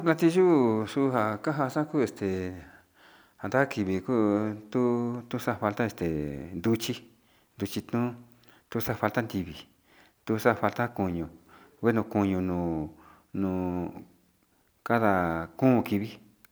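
A speech recording with nothing technically wrong to report.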